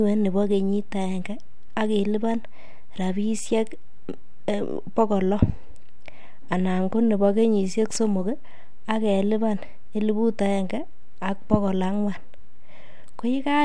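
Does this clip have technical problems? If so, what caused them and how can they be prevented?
No, there are no technical problems to report in this speech recording. Since nothing went wrong, there is no cause to explain and nothing that needs preventing.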